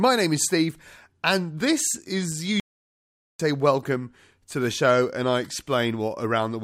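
Speech, with a playback stall from 2.60 to 3.40 s: after "and this is" the output goes completely silent for about 0.8 s before "welcome to the show". Unlike a natural pause, the sound halts mid-flow, likely because the player ran out of data or its thread was blocked.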